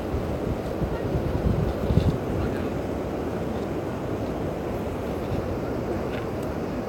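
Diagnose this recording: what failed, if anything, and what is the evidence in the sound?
Nothing failed; no stage shows any fault.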